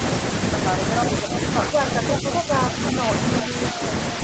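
An echo leak, most likely from a loudspeaker on the far end of the call whose echo canceller failed to remove what its microphone picked up, sends a delayed copy of the speech back into the line from 2.12 to 2.16 s. The returning scrap trails the original by about 344 ms and sits only a few decibels below it, so it comes through as a brief, fairly loud ghost of earlier speech, band-limited like the rest of the call audio to nothing above 8 kHz.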